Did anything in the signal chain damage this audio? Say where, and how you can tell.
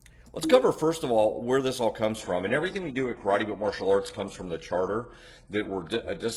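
Yes. From 2.15 s to the end, the adaptive stream drops to a lower bitrate, so this is a network problem showing up through the codec. The switch is abrupt with no gap. Nothing survives above 11.5 kHz. That fits the player stepping down from something like 96 kbit/s AAC to a roughly 12 kbit/s HE-AAC rendition when the connection slowed, with the treble rebuilt by bandwidth replication instead of actually coded.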